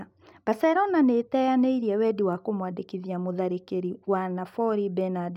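A single flipped bit in one stored or transmitted sample, a bit error spike, occurs twice in this speech. At 2.33 s, between "nĩĩteyanĩirie wendi" and "kũmwandĩkithia mũtharĩkĩri wa", one sample jumps by a power of two, peaking around -35 dBFS, and snaps straight back. The same happens at 5.01 s. Each is heard as a brief, dry tick spread evenly across the spectrum, with no connection to the surrounding speech.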